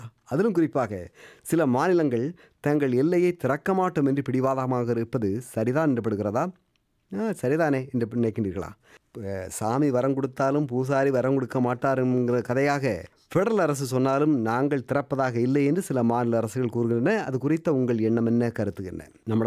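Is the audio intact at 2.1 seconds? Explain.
Yes, the audio is intact at 2.1 seconds, with no dropout, click, distortion or other fault audible at that point.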